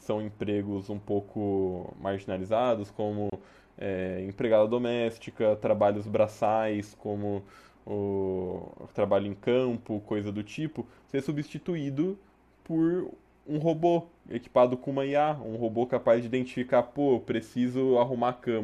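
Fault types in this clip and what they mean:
Gap at a join of encoded pieces: The speech was encoded in separate pieces, then joined untrimmed. Encoder start delay and last-frame padding stayed in. From 3.30 to 3.32 s, a 27 ms gap cuts in. Its edges are smeared. Speech resumes where it stopped.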